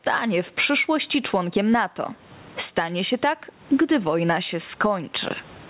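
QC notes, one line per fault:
Throughout: gain pumping. The gain swings by around 20 dB, so the level sounds squashed flat. The likely cause is mic gain set far too high with a fast limiter clamping down.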